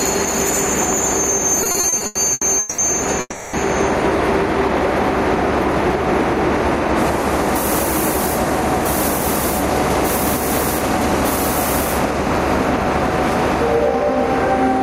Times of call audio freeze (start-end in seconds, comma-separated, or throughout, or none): 3.20-3.56